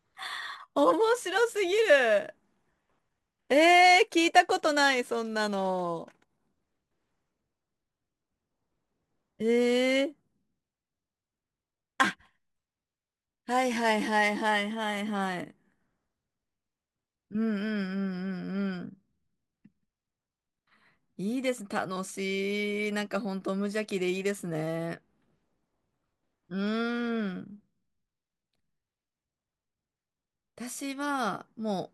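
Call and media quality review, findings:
Crude rate conversion, 0.0 to 14.5 s. Gritty, inharmonic fizz riding on louder and brighter speech, roughly 25 dB below it. Likely resampler repeating samples without filtering. Pattern fits a 44.1 kHz to 48 kHz conversion, producing shifted, inharmonic copies of the speech.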